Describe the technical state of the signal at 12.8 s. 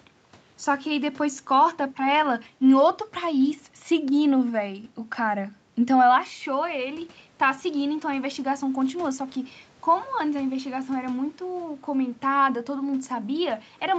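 At 12.8 s the speech is intact, with no fault present, only the band limit to about 8 kHz that the call path imposes throughout.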